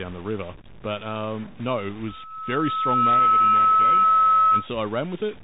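From start to finish, the speech passes through a narrowband Bluetooth CVSD headset codec, and the damage is plainly audible. This codec sends a single up-or-down bit per sample and keeps adjusting its step size, which fits a 64 kbit/s CVSD link. Nothing above 4 kHz survives, so the speech sounds boxed in. Fast, loud high-frequency detail outruns the adapting step and distorts, s sounds come out scratchy, and a grainy hiss sits beneath the speech.

Also throughout, there is a distortion that follows the waveform, and pauses are filled with noise instead of falling silent. The likely cause is a stuck bit: one data line or converter bit held at a fixed value, so roughly half the samples are shifted by that bit's weight. Because the error also flips with the sign of quiet samples, it produces noise even when little is playing.

Right after "um no it", at 2.07 s, a loudspeaker feedback squeal starts. 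The microphone is picking up the loudspeaker it drives, and at 1.3 kHz the loop gain rises above one, so that frequency keeps feeding itself. It grows over about a second into a piercing single tone, ending up roughly 10 dB above the speech, and it lasts until 4.68 s.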